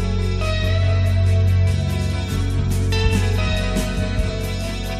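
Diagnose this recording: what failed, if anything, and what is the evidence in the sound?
Nothing failed here as far as I can hear, with no point anywhere in the recording where any stage of the chain gives itself away.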